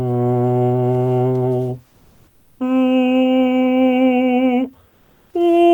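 From 1.87 to 2.59 s, and again from 4.89 to 5.33 s, the quiet background between passages of the music turns into comfort noise in place of the background, likely from Opus discontinuous transmission filling gaps with synthetic noise. It sits about 41 to 42 dB below the loud parts at nearly the same level, but sounds flat and featureless. On a spectrogram these stretches show a smooth, uniform haze without the fine texture on either side.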